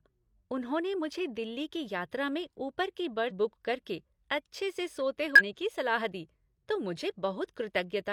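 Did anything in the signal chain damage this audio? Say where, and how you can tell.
Yes. At the codec stage, whole compressed frames were lost or rejected by the decoder as damaged, so they never reached playback. The speech jumps ahead at 3.26 to 3.32 s, skipping roughly 150 ms, and again at 5.36 to 5.42 s, skipping roughly 300 ms. These are compressed frames skipped: the missing time is a multiple of the frame length.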